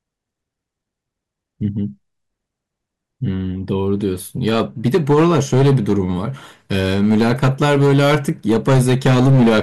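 At 1.65 s there is a brief instance of hard clipping. A peak just reaches the limit, with overdrive of about 0 dB, so only a crackle results. From 4.46 to 6.00 s the speech is driven about 9 dB past what the stage can pass. Peaks are sliced flat, adding high harmonics and a harsh fuzz. From 6.71 to 9.60 s the overload grows to about 11 dB, and every loud syllable sounds gritty and distorted.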